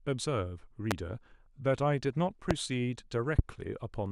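Three loud pops land on the speech, at 0.91 to 0.94 s, 2.51 to 2.53 s and 3.39 to 3.41 s, each a single sharp hit around 20 dB above the talking. That's likely a voltage spike from a switch, static or driver glitch, with the speech continuing underneath.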